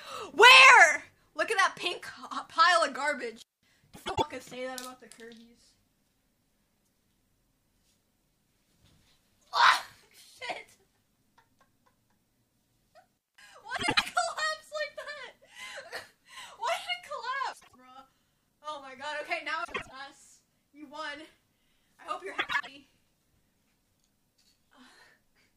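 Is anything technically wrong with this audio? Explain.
Yes. There are two kinds of fault.

Intermittent contact occurs at 3.36 to 3.69 s and 13.16 to 13.41 s. A loose connection briefly breaks the signal path, for about 207 ms and 193 ms. The sound drops out with crackle at the make and break, and faint hiss remains while the line is open. A waveform shows a sudden collapse to near-flat noise framed by spiky edges. A spectrogram shows a pale gap with vertical broadband streaks at both boundaries.

Frames out of order occur at 3.94 to 4.23 s, 13.76 to 14.03 s, 17.53 to 17.75 s, 19.64 to 19.92 s and 22.38 to 22.68 s. In each case two adjacent chunks of decoded audio play swapped. Each chunk is about 104.5 ms long, except at 17.53 s, where each is about 78.4 ms. This fits whole codec frames being reordered. The result is a short garbled flutter, and no time is lost. A spectrogram shows abrupt discontinuities where the spectral content jumps out of sequence.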